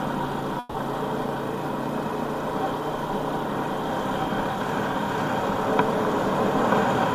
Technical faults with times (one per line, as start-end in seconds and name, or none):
0.59-0.76 call audio freeze